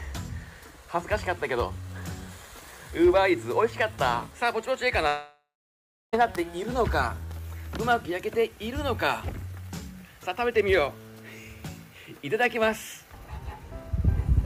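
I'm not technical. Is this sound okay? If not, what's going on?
No. Long network dropout, 5.07 to 6.15 s: a fading buzz then silence fills the gap, and about a second of sound is lost, likely from network trouble.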